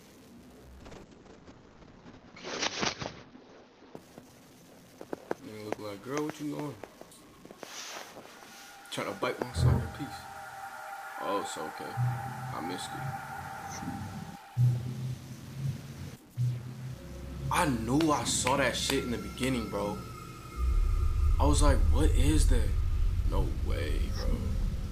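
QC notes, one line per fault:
throughout, stuck bit: likely one converter data bit held at a fixed value, giving distortion and a noise floor that fills the pauses.
0.82–6.73 s, call bitrate drop: encoder bitrate fell from 128 to 7 kbps, lowest for 1.35 s, bandwidth from 20 kHz to 8 kHz, so the sound turns rough and muffled.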